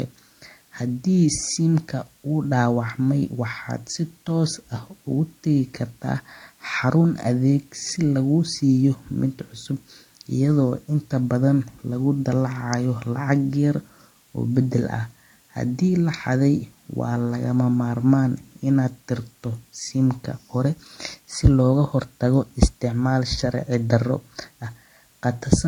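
The speech has most likely been transcoded from one lossy codec into another, with a low-rate MP3 stage, consistent with about 48 kbit/s, re-encoded as AAC-LC at a rate that fits roughly 32 kbit/s. Throughout the clip nothing remains above 10.1 kHz, so the top end sounds dull. The second encoder spends its small budget on the first one's artefacts, and the two sets of coding smear and swirl are heard layered together.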